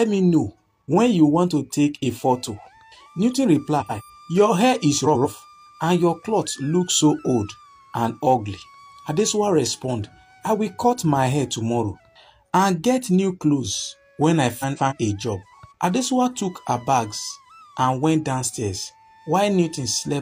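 The audio has three short stretches of frames out of order, at 3.80 to 4.03 s, 5.05 to 5.26 s and 14.59 to 14.93 s. In each, two neighbouring blocks of about 93 ms (about 139 ms in the last) play in swapped order, which fits runs of two and three codec frames. The result is a garbled flutter. Unlike a dropout or a repeat, no sound goes missing or doubles and the timing stays intact.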